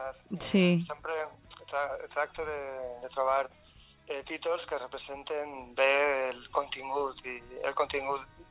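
No technical faults are audible.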